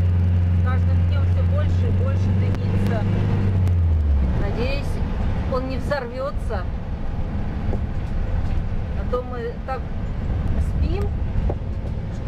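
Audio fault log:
2.87–3.95 s: CD scratch ticks, five regular clicks at about four or five per second, the longest a few milliseconds. A scratch wipes out data once per disc turn, and the player patches or mutes the gap.
9.67–11.29 s: CD scratch ticks again, seven shorter clicks at about four per second, the longest about 1.5 ms. It's the same once-per-revolution damage.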